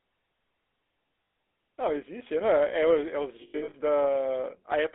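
The whole speech clip carries GSM full-rate codec damage. It passes roughly 300 Hz to 3.6 kHz, which fits 13 kbps full rate. The voice sounds plainly buzzy and gravelly.

From 1.24 to 1.34 s, lost GSM frames leave a 100 ms gap. The last good frame is repeated, giving a rough, metallic ring. From 3.42 to 3.75 s, losses totalling 260 ms are scattered through the stretch. The longest run is around a tenth of a second, so the ring recurs in short bursts.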